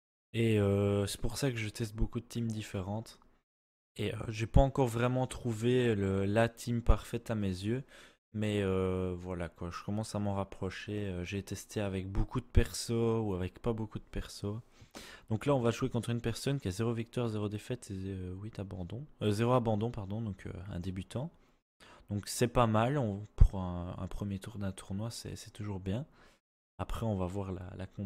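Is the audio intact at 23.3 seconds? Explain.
Yes, the audio is intact at 23.3 seconds, with no fault at that point.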